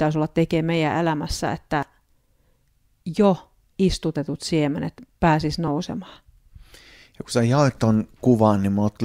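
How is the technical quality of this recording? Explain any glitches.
There are two small glitches in this speech. At 1.83 s, right after "olla tekemään meidän elämässä", and at 5.68 s, after "istutetut siemenet pääsis", you get a tiny jump forward. That's likely a dropped buffer (overrun): a few milliseconds of audio got overwritten before capture and the edges were butted together.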